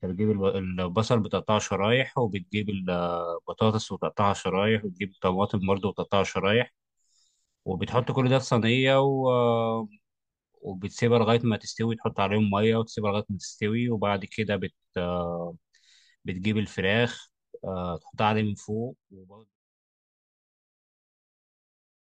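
No technical faults can be heard in the speech, and the only change in level is a deliberate, smooth fade-out that begins around 18 s and reaches silence at 19.6 s without any click or hard edge.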